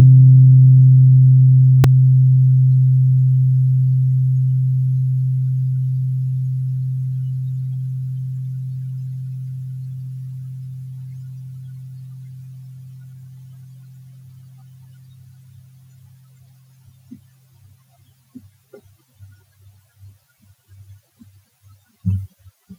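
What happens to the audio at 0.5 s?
Nothing goes wrong at 0.5 s; the sound plays through that moment intact, with no fault to be heard.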